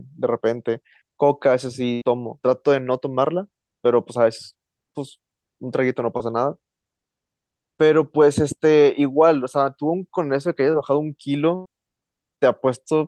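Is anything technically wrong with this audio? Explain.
Yes. The speech has two bursts of packet loss and three short concealed packet losses.

Bursts of packet loss occur at 1.93–2.03 s and 11.55–11.67 s. About 80 ms and 100 ms of audio never arrived. The receiver extended the preceding sound and faded it across the gap, giving a held buzz or decaying hiss before the speech picks up further on.

Short concealed packet losses occur at 6.17 s, 10.72 s and 12.35 s. Each one drops about 20 ms. The decoder fills the hole by continuing the last sound, then crossfades back into the real signal. The result is a brief smear or wobble, and a short consonant may disappear.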